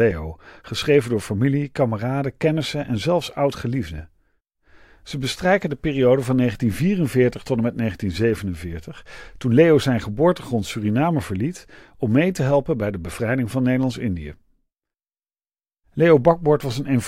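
Speech recording, no technical faults detected.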